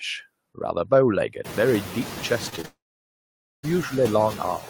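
Throughout the clip, a noise suppressor is cutting the bands it judges to be steady noise by only about 3 dB, frame by frame. After the room noise rises by about 23 dB near 1.5 s, it still sits about 13 dB below the speech. This leaves residual noise that dips in the gaps and swells back under the speech.

Between 2.49 and 2.66 s, three short concealed packet losses follow in close succession, at 2.49 to 2.54 s, 2.56 to 2.59 s and 2.61 to 2.66 s. Each leaves a gap of about 20 ms that the decoder patches by extending the preceding sound. The result is a rapid run of small smears and wobbles.

From 2.66 to 3.65 s, a long network dropout, likely caused by audio simply not arriving, takes over straight from that last patch. The receiver briefly continues the previous sound as a fading buzz or hiss. Then about 0.86 s of silence follows before the speech returns, with that stretch missing.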